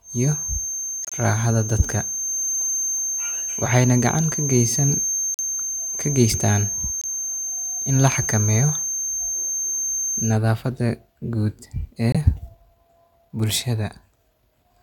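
Feedback whistle from 0.00 to 10.39 s: a thin, steady tone at 6.3 kHz sits about 5 dB under the speech, swelling and fading slowly in level. It is likely a loudspeaker-to-microphone loop held just at the edge of feedback, so that one frequency rings on without building up.

Corrupt frame muted at 1.03 to 1.13 s: the speech drops abruptly into silence for about 97 ms, which fits several damaged frames that the decoder rejected and the player replaced with silence. Timing is preserved, and the speech picks up exactly where it should.

Corrupt frame decoded at 3.65 to 3.68 s: a sharp burst of about 32 ms, peaking around -5 dBFS, consistent with a single damaged frame played anyway. Its misread values put energy at the wrong frequencies, so it comes out as a harsh blip rather than speech.

Corrupt frame muted again at 5.34 to 5.40 s, 7.01 to 7.05 s and 12.12 to 12.16 s: three more sudden holes, each 36 to 56 ms long. 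Like the first, they are rejected frames replaced by silence, with no shift in timing.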